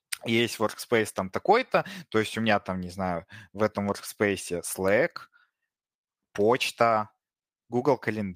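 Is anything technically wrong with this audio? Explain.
No, the signal shows no technical faults that a listener can pick out anywhere in the recording.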